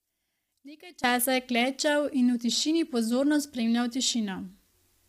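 From the start to about 1.04 s, just before "časa je", the speech drops by about 21 dB and sounds like a faint ghost of itself. That points to one channel inverted: with one side's polarity likely flipped, everything common to both channels cancels when they're summed to mono, and only the small difference between them survives. Once the level comes back, the centred material returns at full body.

Right through the clip the speech has a rough, grainy texture, with noise filling the gaps between the harmonics and a top end that sounds synthetic rather than airy. That's the signature of low-delay AAC compression, likely AAC-ELD at a low rate, something like 32 kbps. At that rate too few bits are left to code the harmonics accurately, so the encoder smears noise between them and rebuilds the highs from a cruder estimate.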